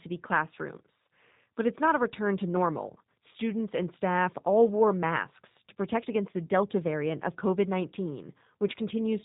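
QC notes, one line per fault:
Throughout, G.729 codec: the speech is dull and boxy, with nothing above 4 kHz, and has a plainly audible rough, buzzy, synthetic edge. The codec does not carry the waveform. It rebuilds each 10 ms frame from a vocal tract filter, a pitch predictor and a few coded pulses per half-frame, so fine detail is replaced by an approximation. That produces the grainy, artificial texture, and the bandwidth and coarseness fit a G.729A stream at about 8 kbit/s.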